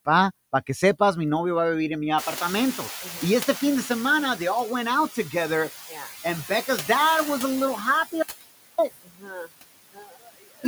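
A speech recording in which the background is pumped up and down around the talker for its whole length. That is noise suppressor artifacts: the suppressor is pulling down each band it judges to be steady noise, frame by frame, by about 15 dB, so the noise floor sinks in the gaps and swells back under the voice. Just after 2 s the room noise jumps by about 23 dB, ending up about 13 dB below the speech. From 2.17 s, after "vivir en mi", the new noise pours through with only about 6 dB taken off, then gradually sinks over roughly 2.2 s until about 4.38 s, before "they all went out". This is the noise suppressor catching up, its noise estimate lagging the sudden rise and adapting only slowly. Inside that stretch, from 3.03 to 3.22 s, part of the speech dips by up to about 8 dB, and later from 9.04 to 9.5 s and from 9.93 to 10.65 s part of the speech sounds swallowed, dropping by as much as about 18 and 21 dB. 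These are speech cut by the noise suppressor, which mistook parts of the speech for background and turned them down with it. At 8.22 s, right after "was a little happy", the sound abruptly vanishes to a faint trace far below normal level and snaps back at 8.78 s, a gap of about 0.56 s. That audio dropout to a faint residue is likely a brief loss of the signal upstream while the path after the break stayed live.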